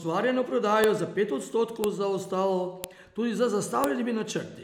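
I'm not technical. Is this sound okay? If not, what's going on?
No. There are four sharp, loud clicks, at 0.84, 1.84, 2.84 and 3.84 seconds, one every second. The first comes right before "za pet" and the second right after it. This is a file header played as audio. The recording was joined from one-second pieces, and each piece still carried the small block of file information at its start. That data was played as sound, giving a snap at every join.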